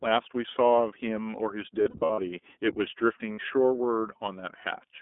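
Throughout, the speech passes through the iLBC codec in 20 ms frames, which fits its 15.2 kbps mode. The band runs only from 250 Hz to 3.5 kHz, and the speech sounds plainly rough and synthetic. From 1.82 to 2.20 s, lost iLBC frames total about 220 ms scattered across 360 ms, with the longest gap lasting well under a tenth of a second. The decoder fills each gap by repeating the last pitch cycle mixed with noise, which produces brief buzzy, held vowel sounds. The same happens for 60 ms at 3.32 to 3.40 s, and the voice is right again almost at once.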